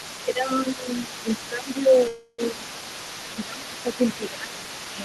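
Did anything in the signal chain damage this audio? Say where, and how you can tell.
Yes. A second voice runs under the talker throughout, at about 15 dB below the main speech. This is other side's voice leaking through, and the stage is call processing. The far end's audio was played on the talker's loudspeaker and picked up again by the microphone, and the echo canceller likely left a residue of it. On a spectrogram it shows as a fainter, independent set of harmonic traces overlapping the talker's. In the waveform it appears as a low-level envelope filling the pauses.

The talker's own level sinks in six places: 0.25 to 0.89 s, 1.07 to 1.28 s, 1.49 to 2.92 s, 3.28 to 3.99 s, 4.18 to 4.75 s and 4.94 to 5.00 s. The drops are about 10 dB, except the last, which is about 5 dB. This is speech suppressed in double talk, again in call processing. With both sides active, the canceller likely could not tell near speech from echo and attenuated everything. 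In the waveform the envelope is visibly pinched.

From 2.07 to 2.40 s, the sound stretches into a sustained, fading buzz or hiss for about 311 ms before normal audio picks up again. This is a call audio freeze, at the network and jitter buffer stage. Delayed packets likely emptied the buffer, and the receiver extended the last sound until they arrived. Nothing is lost, only delayed. On a spectrogram it appears as a smeared, frozen band that decays, and in the waveform as a smooth tail with no new onsets.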